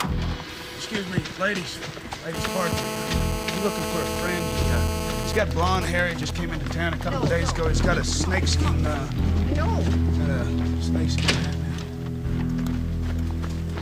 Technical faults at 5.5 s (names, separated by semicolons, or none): GSM signalling bursts